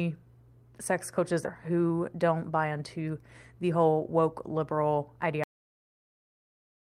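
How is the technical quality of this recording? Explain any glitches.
The recording has three clear glitches, two of them the kind you get from a network receiver struggling with its packet timing.

At about 1.45 to 1.47 s, right after "sex coaches", there's a skip ahead. Roughly 0.4 s of speech was dropped, likely by the jitter buffer discarding queued audio, so playback jumps forward with no gap and the two sides are spliced almost directly together.

From 1.55 to 2.81 s comes a jitter buffer speed-up. The receiver had too much audio queued and trimmed it by cutting out tiny pitch-period slices, around 150 ms in total. The speech runs at about 112% speed with unchanged pitch, so it sounds noticeably hurried.

At 5.44 s, just after "the whole woke liberal", there's a cut-off end. The final buffers never got played, so the speech stops mid-sound and drops straight into digital silence with no natural decay for the remaining second and a half.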